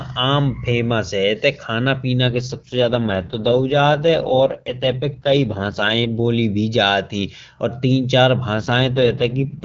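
From 2.26 to 6.19 s, then again from 8.54 s to the end at 9.64 s, there's an AMR rate drop. The network has pushed the AMR-WB codec down its rate ladder, trading speech bits for error protection on a struggling radio link. The band stays put and nothing drops out, but the speech turns rough, raspy and synthetic, which fits a fall from 23.85 to 6.6 kbit/s. It cleans up between 6.19 and 8.54 s, when the higher rate comes back.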